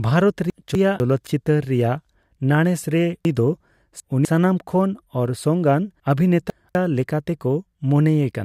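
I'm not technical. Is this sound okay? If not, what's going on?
No. Chunks out of order at 0.5–1.0 s, 3.25–4.25 s and 6.0–6.75 s: a quarter-second piece plays too late, so the speech jumbles briefly.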